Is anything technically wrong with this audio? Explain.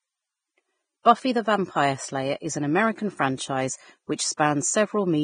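Yes, two things. The whole clip shows heavy damage, likely from Vorbis compression at a low bitrate, around 21 kbps: nothing above 9.7 kHz, and grainy, hissy treble roughening the speech. At 1.03 s there's pre-echo: an attack late in a transform block drags its quantisation noise forward, so a 26 ms hiss precedes it and softens the onset.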